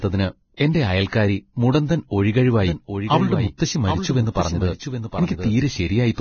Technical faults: Vorbis compression; pre-echo; doubled audio track

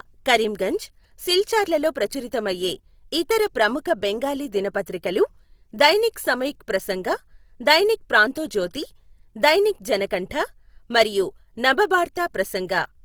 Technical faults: Opus compression

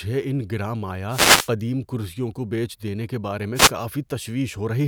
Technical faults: wireless microphone noise hit

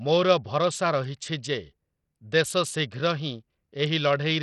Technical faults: Bluetooth SBC compression

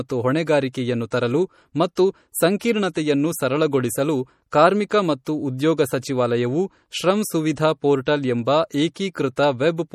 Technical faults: MP3 compression; pre-echo

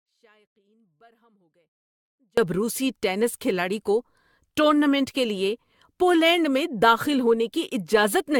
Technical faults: generation loss; audio dropout to a faint residue

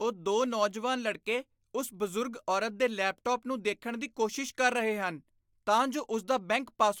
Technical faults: none

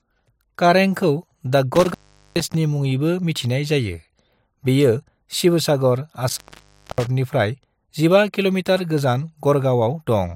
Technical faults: intermittent contact

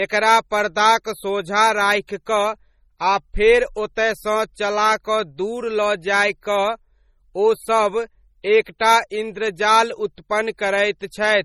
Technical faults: MP3 compression; pre-echo

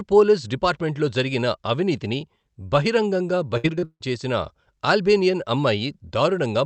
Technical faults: repeated packet loss (robotic sound)

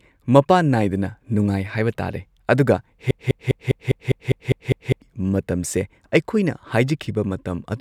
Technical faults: broken-record loop

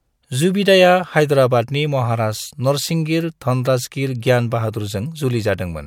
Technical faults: none

